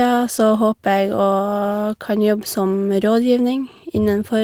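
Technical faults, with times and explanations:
No technical faults can be heard in the speech. There is nothing here that needs a time or an explanation.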